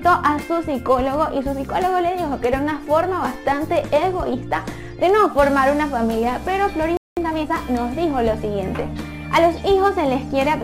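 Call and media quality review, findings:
Playback stall, 6.97 to 7.17 s: output cuts to silence for about 200 ms mid-flow. Component likely the player's buffering or output thread, either starved of data or blocked, so nothing was written to the device until it recovered. Sound stops abruptly, then resumes.

Time-compressed catch-up, 7.17 to 7.55 s: directly after the stall, the player works off its backlog by removing short segments and cross-fading the joins. Audio runs at 1.5x speed with pitch unchanged, so this stretch sounds hurried.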